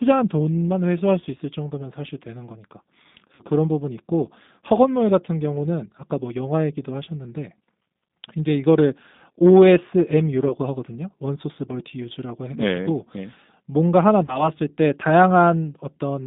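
Throughout, the speech sounds thin, slightly rough and synthetic, held within roughly 150 Hz to 3.7 kHz, with plainly audible coding damage. This is the G.729 codec, and it points to the 8 kbit/s G.729A variant, which models speech with a predictive filter and sparse pulse excitation instead of carrying the waveform itself.

From 3.35 to 3.44 s the speech is stretched out and fades. About 40 ms is missing, which fits two lost packets. At 10.48 to 10.53 s a shorter concealed stretch covers a gap of about 20 ms. At 14.26 to 14.49 s a similar 20 ms gap leaves the speech weak and distorted for longer. This is VoIP packet loss concealed by the speech codec. The decoder extends its last pitch and filter state while turning the level down. Because each frame depends on the one before, recovery lags after packets resume.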